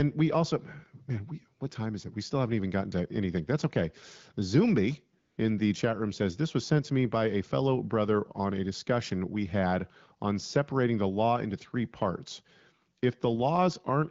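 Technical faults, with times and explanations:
5.19 to 5.37 s, AMR comfort noise: for about 180 ms just before "in the chat room" the phone sent no speech frames, and the receiver filled the gap with smooth synthetic noise built from a rough level and spectrum estimate. The real background drops out briefly and returns when speech frames resume. The speech path is AMR-WB at 12.65 kbit/s, with light coding damage.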